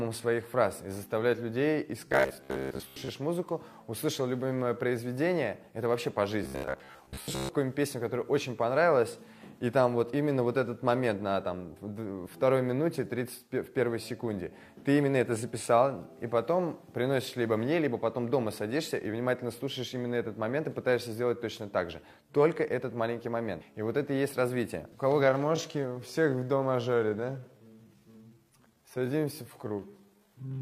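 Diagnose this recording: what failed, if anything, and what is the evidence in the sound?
Driver or buffer stage: robotic sound from repeated short buffers at 2.08–3.08 s and 6.44–7.49 s. Both spans carry a rigid metallic buzz at 66.8 Hz, a period near 15 ms. The likely cause is late buffer delivery, with a short segment looped to cover most of each gap while the real audio is skipped.

Codec or storage stage: damaged data in a compressed stream at 23.57–23.62 s. A brief glitch marks where the decoder hit corrupted frames, misread them, and lost sync until it found a valid frame header and resumed.

Processing stage: a time-stretched section from 25.19 s to the end. The pace drops abruptly to 0.729 times normal speed while the pitch holds. This is likely a length-fitting stretch that repeats short pieces to hold pitch.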